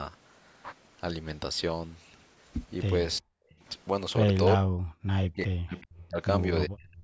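At 3.19 s the speech drops out hard for about 0.15 s, falling by something like 40 dB. That's speech suppressed in double talk, most likely the echo canceller hearing the far end at the same time and ducking everything because it can't separate its own talker from the loudspeaker echo. It happens again from 4.55 to 4.83 s, then for a long stretch from 5.01 to 6.19 s, where roughly a second of sound is pulled down. The last dip starts at 6.67 s and runs to the end of the clip.

Along the way, at 3.50 s and again at 5.76 s, you catch short scraps of an echo leak. Each is a copy of the speech arriving about 0.4 s late, probably residue the far end's canceller didn't remove from its loudspeaker pickup and sent back. The first scrap is very faint. The second is noticeably stronger but still well under the main speech. All of it sits under the usual call microphone band limit, with nothing above 8 kHz.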